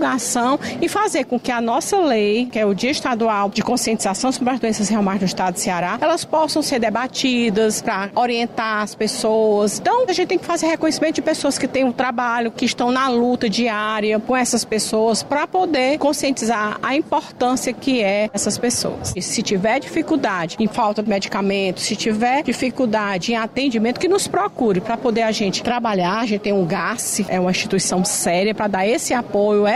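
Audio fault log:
No faults can be heard anywhere in this audio.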